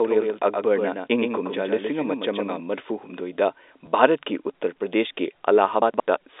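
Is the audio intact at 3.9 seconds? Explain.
No, at 3.86 s there is packet loss with the last packet repeated: a 10 ms gap is filled by replaying the previous packet, causing a small blip.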